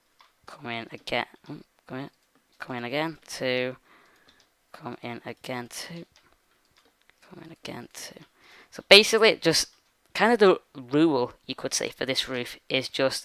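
No technical faults can be heard in this audio.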